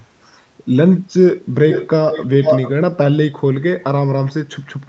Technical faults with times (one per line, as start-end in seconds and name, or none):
1.70-2.72 echo leak